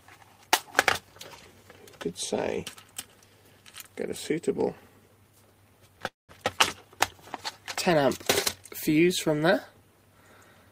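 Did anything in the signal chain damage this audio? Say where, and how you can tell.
Yes, at the network stage. A call audio freeze from 6.07 to 6.31 s: brief fading buzz or hiss, then silence, and the sound resumes where it left off. Likely delayed packets emptied the jitter buffer.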